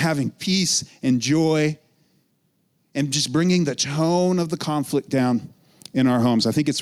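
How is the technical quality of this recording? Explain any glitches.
The recording suffers from gain pumping throughout the speech: the gain swings by about 5 dB, pulled down under each loud syllable, leaving the delivery squashed and level. This is likely a fast limiter clamping down on input gain set far too high.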